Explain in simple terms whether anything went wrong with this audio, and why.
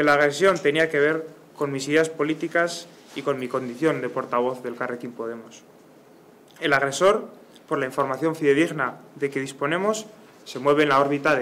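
Something did go wrong: the audio suffers from hard clipping in five places, from 0.07 to 0.84 s, 1.96 to 2.01 s, 2.58 to 2.60 s, 6.66 to 7.10 s and 10.68 to 11.34 s. The signal there was louder than the recording chain could hold, so the tops of the waveform were sliced flat. Those flat edges create harsh extra overtones, heard as a gritty fuzz, strongest in the longer stretches and a brief crackle in the short ones.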